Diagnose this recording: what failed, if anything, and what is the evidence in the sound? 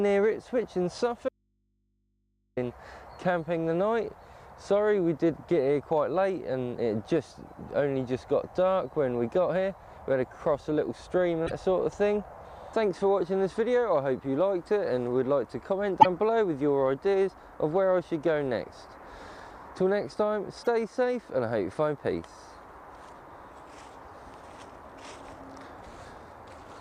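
Audio dropout to a faint residue from 1.29 to 2.57 s: the signal cuts abruptly for 1.28 s, leaving only faint mains hum, likely an open analogue input connection.

Broken MP3 bit reservoir at 11.46, 16.00 and 20.63 s: short glitches where the audio jumps ahead, likely from missing codec frames in storage, consistent with 26.1 ms frames.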